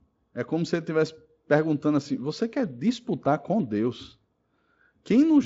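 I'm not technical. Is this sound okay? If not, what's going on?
Yes, nothing has gone wrong with this speech recording. It has passed through the Speex speech codec, which leaves at most a faint trace here and cuts off the very highest sounds above about 7.7 kHz, so the top end is slightly less airy than full-range audio.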